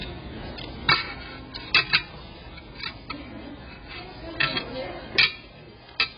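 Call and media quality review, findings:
Encoder starved of bits throughout, likely AAC compression (AAC-LC) at a very low rate, fitting roughly 12 kbps. Band limit at 5.5 kHz, nothing above. Sparse quantised spectrum with gaps: heavy damage, dull, smeared audio, warbling and fizzy texture on sustained sound.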